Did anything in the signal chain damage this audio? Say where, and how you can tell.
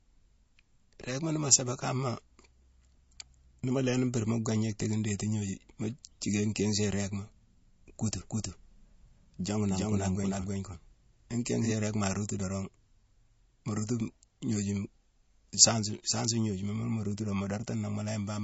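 Yes. MP3 compression affects the whole clip at the codec stage. Nothing remains above 7.6 kHz, and the speech sounds watery and swirly with smeared attacks. That points to a bitrate around 32 kbps, with a starved encoder cutting the treble and switching weak frequency lines on and off.

A doubled audio track runs from 8.19 to 11.71 s, at the capture or editing stage. A full-band copy at roughly equal level trails about 0.3 s behind, starting and stopping abruptly without any room decay. It is likely a second, delayed copy mixed in.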